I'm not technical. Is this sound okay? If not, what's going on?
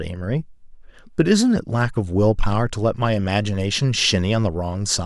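Yes, this sound is okay, and nothing is going on with it that needs fixing.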